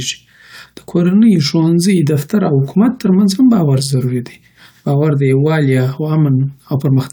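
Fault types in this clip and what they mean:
There are no fault types in this clip.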